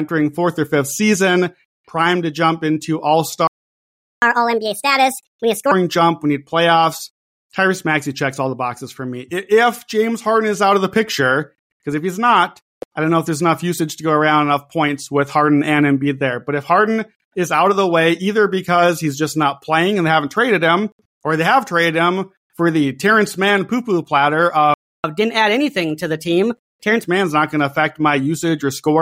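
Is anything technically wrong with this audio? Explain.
Yes. The speech has two playback stalls, each followed by catch-up at higher speed.

The first stall runs from 3.47 to 4.22 s. The speech cuts out mid-flow and leaves about 0.75 s of silence. The second, from 24.74 to 25.04 s, is shorter at about 0.3 s. In both, the output simply goes dead and then resumes. The likely cause is that the player ran dry of buffered data or had its audio thread blocked.

Catch-up at higher speed follows each stall. From 4.22 to 5.71 s the speech plays at 1.5 times normal speed. Pitch jumps by roughly seven semitones, giving a hurried, chipmunk-like voice. From 25.04 to 27.04 s the rate is 1.15 times, and pitch rises about two semitones. This is gentler but still audibly rushed. The player is resampling its backlog faster to recover lost time. It then returns to normal speed and pitch.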